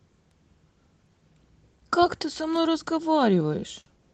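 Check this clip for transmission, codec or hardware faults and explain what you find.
One transmission fault is audible, near the end of the speech.

Short stall from a late packet, 3.81 to 3.88 s: a packet missed its playout time, so the jitter buffer emptied and the receiver stretched the last sound by 55 ms until the packet arrived. Nothing is skipped, but that sound is held unnaturally long, and everything after it plays 55 ms late. The speech also carries the call codec's band limit at about 12 kHz.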